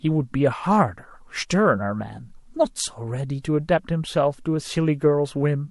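Speech, with a brief hiss rising about 11 dB just before a sharp attack from 3.42 to 3.44 s, softening it: pre-echo, from quantisation noise spread across a roughly 36 ms transform block without switching to short blocks.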